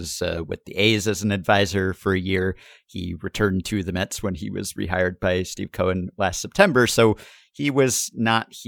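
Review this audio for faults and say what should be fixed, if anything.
Nothing in this speech recording needs fixing. No faults can be heard at any point, so there is nothing to correct or guard against.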